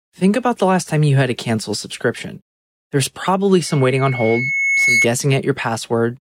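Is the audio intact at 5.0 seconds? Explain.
No, at 5.0 s there's loudspeaker feedback squeal, running 3.66 to 5.07 s: the mic re-amplifies the speaker until a 2.2 kHz tone swells, over about a second and a half, to roughly 5 dB above the sound.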